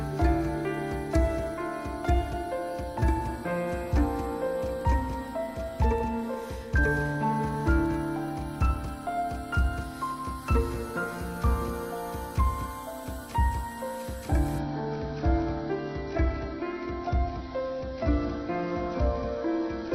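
At 14.59 s an adaptive stream drops to a lower bitrate, its encoding falling to what sounds like roughly 24 kbit/s AAC, and stays there to the end. With no gap, treble vanishes above 6 kHz and codec artefacts suddenly thicken into a dull, smeared sound.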